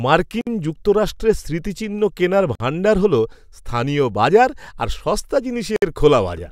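At 0.41 s, 2.55 s and 5.76 s the speech drops into sudden silences of about 57, 49 and 60 ms, with smeared edges, then resumes where it stopped. These are gaps at joins of encoded pieces: separately encoded segments were spliced without trimming their encoder delay and end padding.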